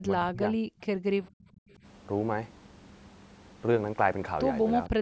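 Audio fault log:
0.00–0.68 s and 4.89–4.98 s, speech suppressed in double talk: when both ends spoke at once, the echo canceller likely could not separate the near talker from the loudspeaker echo and pulled the whole microphone signal down. The speech dips by up to roughly 40 dB across the opening 0.7 s, and again by roughly 35 dB in a brief 50 ms bite near the end.
1.68–1.74 s, background gated by the echo canceller: with the loudspeaker active, the canceller clamped the microphone path hard for a moment, then released it. The room sound sags by about 10 dB for roughly 70 ms and comes straight back, a short hole in the background. The call microphone processing limits the band, with nothing above 8 kHz.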